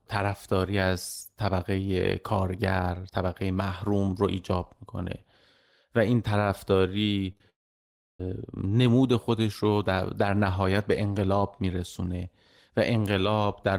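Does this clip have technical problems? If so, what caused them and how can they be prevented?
Yes. Three short concealed packet losses run back to back at 7.32 to 7.35 s, 7.35 to 7.37 s and 7.37 to 7.41 s, covering about 20, 10 and 20 ms of missing speech. In each gap the decoder extended the preceding sound, pitched if voiced, noise-like if not, and cross-faded back to real audio, leaving a short smeared, wobbly patch. A larger adaptive jitter buffer with forward error correction would prevent these losses.

Just after, from 7.50 to 8.20 s, the speech breaks off. A brief continuation of the last sound fades out, then about 0.66 s of silence follows, and the speech resumes further on without the roughly 0.7 s that went missing. This is likely a long network dropout, where no packets arrived for that stretch and concealment could only bridge the first few hundredths of a second before falling silent. 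A more stable network path, such as wired rather than congested wireless, with redundancy for burst losses, would prevent it.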